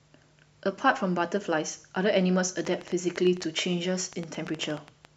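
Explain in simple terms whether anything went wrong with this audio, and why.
Something in the recording chain, likely electrical interference from nearby equipment or a faulty connection or power supply, started injecting short pulses into the signal. The result is a train of clicks from about 2.59 to 5.06 seconds: around twenty sharp ticks, roughly nine per second but unevenly spaced. Each click sounds much the same, and they stand out above the speech, popping through the pauses as well as over the talking.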